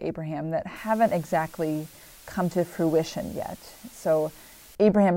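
A steady, even hiss sits under the speech from 0.76 s to 4.75 s, with no crackle or harsh distortion, just a flat noise floor only some 25 dB below the talking. That is low bit depth with dither: the audio in this stretch is carried at just 7 bits, and random dither added before rounding to so few levels turns the quantisation error into constant white noise rather than grainy, signal-dependent distortion.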